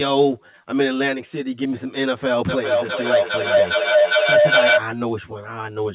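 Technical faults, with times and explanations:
Throughout, channel delay (comb filtering): one channel arrives roughly 10 ms behind the other, and when the two are summed to mono, what they share cancels at evenly spaced frequencies starting a few tens of hertz up. This gives the speech a fixed hollow, phasey colour across the telephone-width band, which stops near 4 kHz. Unlike a moving flanger or reverberant room colouration, these notches never shift and add no tail.
2.49 to 4.88 s, feedback howl: a second device in the same room picks up the call's loudspeaker output and feeds it back, and the loop gains level on every trip. The sound narrows to a tone around 700 Hz that pulses roughly every 0.4 s, the loop's round-trip time, and peaks about 7 dB above the speech. Unlike an echo, the repeats grow instead of fading, and the howl lasts until the loop is broken.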